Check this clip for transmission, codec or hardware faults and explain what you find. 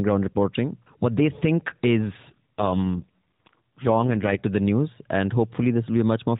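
One transmission fault stands out. After "they think", from 2.30 to 4.38 s, an AMR rate drop makes the speech buzzier and more synthetic, consistent with a fall from 12.2 to 4.75 kbit/s, before recovering at "to the news". The narrowband band stays the same and nothing drops out, which sets it apart from packet loss.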